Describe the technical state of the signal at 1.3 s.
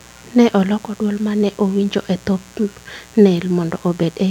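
Mains buzz is present at 1.3 s, as it is throughout the clip: switching spikes at twice the 60 Hz supply stack harmonics into a raspy buzz around 30 dB below the speech.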